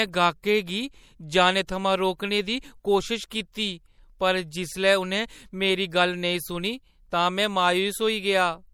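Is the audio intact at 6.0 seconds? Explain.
No. At 6.0 seconds, as across the whole clip, the speech shows plainly audible MP3 compression, likely at a low bitrate near 64 kbps. Nothing remains above 18.7 kHz. Weak frequency lines flicker between frames, giving a watery, swirly texture.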